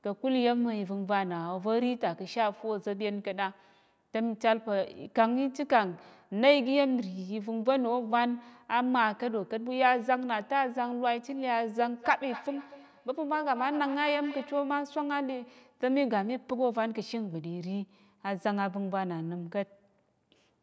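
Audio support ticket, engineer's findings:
Feedback echo between two devices, 11.96–14.8 s: speech returns every fifth of a second or so, thinner and more ringing each pass, about 15 dB below speech. Second device's speaker reaching first microphone; discrete fixed-interval repeats, unlike reverb tail.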